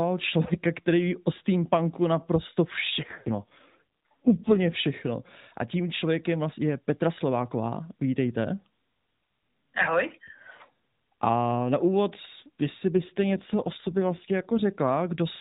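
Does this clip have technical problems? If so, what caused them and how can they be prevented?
Yes, there are two AMR rate drops, from 3.00 to 4.77 s right after "ví o steampunku naprosto" and from 12.95 to 14.61 s after "na úvod jestli". Each time the speech gets rougher and more synthetic with no gap and no change of band, which fits the network pulling the codec from 12.2 down to 5.9 kbps to free bits for error protection on a weak link. A stronger, steadier radio connection keeps the rate up.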